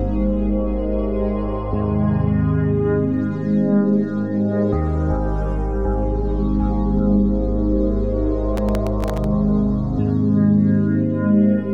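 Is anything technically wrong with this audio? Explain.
Yes. Processor overload crackle runs from 8.57 to 9.24 s. The processor couldn't finish its very short audio buffers, each a millisecond or two long, before their deadlines, and around fifteen of them were missed during that stretch. Each time, a fragment of old audio was replayed in place of the new one, with hard edges at both ends. Strung together, these repeats sound like a gritty, tearing crackle over the sound, which stops once the load eases.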